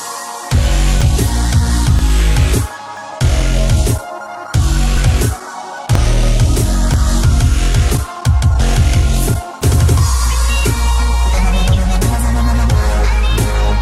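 A small click or skip recurs about once a second, at 1.01, 1.99, 2.97, 3.99, 4.97, 5.95, 6.94 and 7.95 s. This is overlap between stream segments: adjacent 1-second segments claim overlapping time, so playback discards roughly 20 to 30 ms of genuine audio and the waveform jumps.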